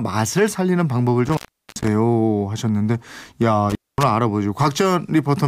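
Around 1.26 s the speech drops out for roughly 390 ms with crackle at both edges, then again at 3.70 s for about 230 ms. That's an intermittent contact: a loose plug or cable briefly opening, leaving just faint hiss.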